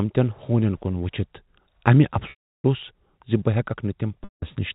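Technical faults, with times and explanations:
2.30 to 2.64 s and 4.24 to 4.42 s, packet loss with pitch repetition: stretches of 340 ms and 180 ms went missing. The receiver held the last pitch period briefly, which gives a buzzy sustain, then faded to silence before speech cross-faded back in over the 4 kHz-limited telephone band.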